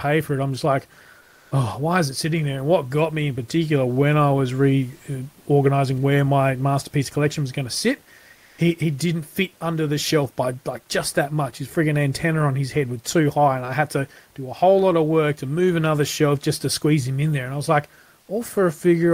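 From 1.20 to 1.51 s and again from 8.34 to 8.58 s, the room noise, sitting about 39 dB below the speech, flattens into a smooth, featureless hiss about 2 to 3 dB different in level: comfort noise in place of the background, likely from Opus DTX pausing transmission.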